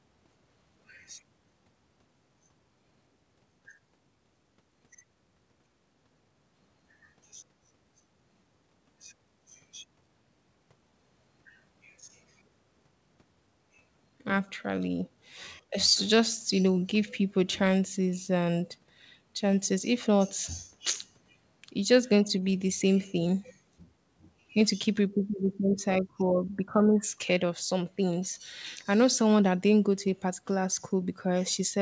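No technical faults can be heard in this speech.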